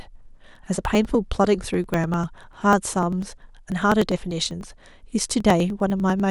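From 0.06 s to 6.2 s, periodic USB or driver dropouts skip about a millisecond of speech every 0.099 s, producing a steady ticking through the signal.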